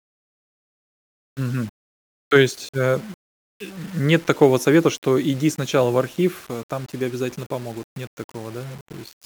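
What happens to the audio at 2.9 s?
At 2.9 s the speech is grainy with low bit depth without dither, present throughout. It likely comes from rounding to about 7 bits, leaving grit roughly 25 dB below the speech that rises and falls with it, unlike steady hiss, which persists through pauses.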